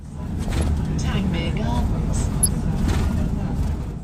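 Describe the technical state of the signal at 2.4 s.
DAB burbling from 2.43 to 2.48 s: residual bit errors corrupt MP2 audio data, putting short blips of noise in individual sub-bands, unlike a dropout's gap or a broadband click.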